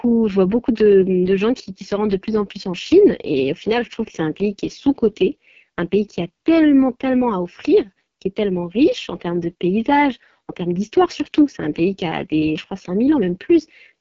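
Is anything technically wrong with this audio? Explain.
Yes. Throughout the speech the sound is rough and raspy, with a buzzy, grainy edge on voiced sounds and a hissy, artificial top end, and nothing reaches above about 7.6 kHz. This is the AMR wideband (HD Voice) codec at heavy damage. It rebuilds the band below 6.4 kHz from a vocal tract model driven by sparse pulses, and fills the region above with shaped noise. At this level of roughness the starved pulse coding points to the codec's lowest modes, which fits the 6.6 kbit/s rate.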